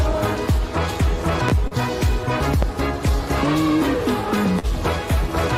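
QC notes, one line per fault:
1.49–1.52 s and 2.63–2.66 s, loud pop: Each span holds a single sharp pop, peaking roughly 15 dB above the surrounding sound. The audio continues underneath without a break. A sudden voltage step has been added to the signal, likely from a plug, a switch, static discharge or a driver glitch. The circuitry downstream shapes that step into a short pulse. This is why it reads as a hard click-thump rather than a change in the sound itself.
1.67–1.74 s and 4.59–4.66 s, short concealed packet loss: In each span about 40 ms of audio never arrived in time. The receiver bridged the gap by extending the last sound it had, for about 36 ms in the first case and about 41 ms in the second. It then blended back into the real signal. The result is a brief smear or wobble rather than silence.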